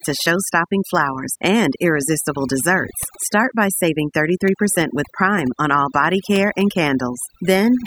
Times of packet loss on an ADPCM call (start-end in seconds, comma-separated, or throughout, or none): none